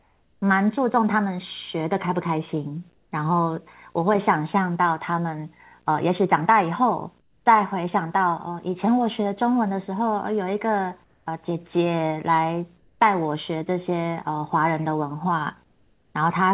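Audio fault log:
Throughout: video or display buzz. A faint, steady buzz at 60 Hz with a thin hash of harmonics sits well beneath the speech. A screen or video cable near the audio wiring is leaking its field-rate energy into the signal.
0.00–0.42 s, 2.94–3.12 s, 7.20–7.46 s, 11.04–11.26 s, 12.78–13.00 s and 15.64–16.14 s: comfort noise in place of the background. In each pause the room tone turns smooth and featureless and drops by about 3 to 8 dB. This is likely synthetic noise generated at the receiver after the sender's voice detector stopped transmitting.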